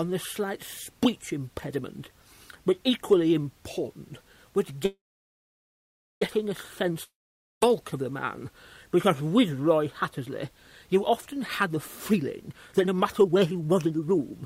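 Packets were likely held up in transit, emptying the jitter buffer, which produces the call audio freeze from 4.85 s to 6.23 s. The receiver stretches the last sound into a brief fading buzz or hiss, then about 1.23 s of silence follows. When the packets arrive, the audio resumes exactly where it stopped, so nothing is lost. But a gap of about 1.36 s has been inserted, and everything after it now plays that much later than it should. Shortly afterwards, a long network dropout from 7.03 s to 7.63 s likely comes from audio that never reached the receiver at all. The same fading buzz covers the first moments and then gives way to about 0.5 s of silence. This time the audio comes back further on, and about 0.58 s of sound is simply gone. Finally, from 11.39 s to 14.43 s, the jitter buffer is holding more audio than it targets, so the receiver trims it down by repeatedly cutting out tiny pitch-period-sized pieces. 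This jitter buffer speed-up makes the audio run at about 131% of normal speed with the pitch unchanged, so it sounds rushed and hurried. Roughly a second of material is removed across those three seconds.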